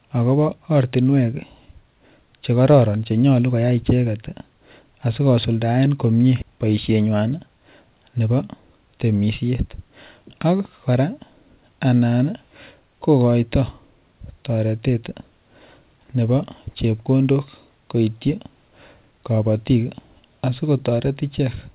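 A skip ahead at 6.42 s: about a third of a second of speech never reaches the listener, and playback jumps straight from the sound before the gap to the sound after it, with no silence or fill between them. A late burst of audio probably piled up in the jitter buffer, which then discarded the backlog to catch up, cutting the delay by roughly the same amount. The join is abrupt, over the narrowband call sound that stops at 4 kHz.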